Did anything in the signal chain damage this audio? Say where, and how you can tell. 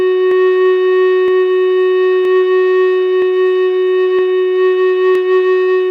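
Yes. At the driver or buffer stage, the music carries regular clicks from about 0.31 s to 5.15 s, recurring every 0.97 s, roughly seven in all. These are clock drift buffer slips, likely from two devices on independent clocks differing by around 150 ppm, so the buffer periodically drops or repeats a few samples. On a waveform each slip is a small discontinuity; a spectrogram shows evenly spaced thin vertical broadband lines.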